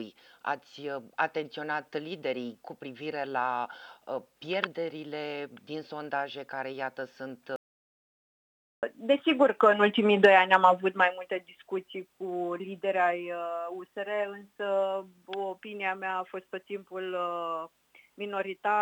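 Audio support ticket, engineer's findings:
Hard cut to total silence at 7.56 s, sound resumes mid-flow at 8.83 s. Gap about 1.27 s, no room tone. Audio dropout to silence: input path lost, likely a disconnected device, failed link or stray mute, while the recorder kept writing silence. Abrupt edges on both sides. Content in that span is unrecoverable; re-record or patch from another source.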